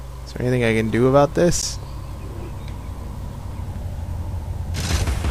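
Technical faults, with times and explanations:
1.62 s, gap between stream segments: the time stamps of two consecutive stream segments fail to meet, so the player fills the space between them with about 12 ms of silence. The sound stops abruptly and resumes with hard edges, a brief dropout where no audio is actually lost.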